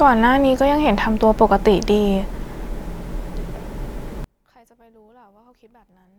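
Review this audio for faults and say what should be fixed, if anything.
From 4.24 s to the end at 6.18 s, one channel has most likely been inverted in polarity. When left and right are summed to mono, the speech they share cancels, so the level falls by about 36 dB and the voice nearly vanishes, leaving only a faint residue of whatever differs between the two channels. The fix is to restore that channel's polarity for the section. To prevent it, check polarity and mono compatibility on every stereo path before release.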